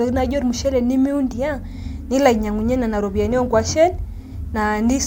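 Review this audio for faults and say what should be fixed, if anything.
Nothing here needs fixing, as the speech comes across without any audible faults to chase down.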